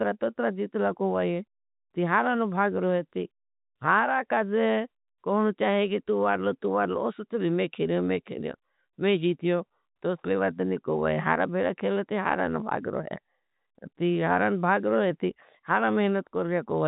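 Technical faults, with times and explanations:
The speech carries the narrow telephone band of G.711 mu-law coding at 64 kbps, with nothing above 3.8 kHz, and no technical faults can be heard anywhere in the clip.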